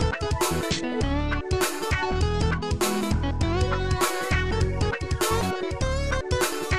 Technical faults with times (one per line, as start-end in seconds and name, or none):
none